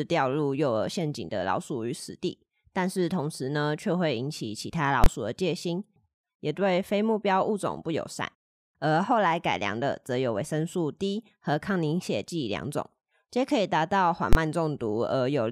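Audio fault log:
5.04–5.06 s and 14.33–14.35 s: invalid numbers at full scale. Each time, the speech gives way to a single loud bang. A calculation produced invalid values, which were pinned at maximum level for about 23 ms, which fits a 1024-sample block. The burst is too brief to hear as separate pops.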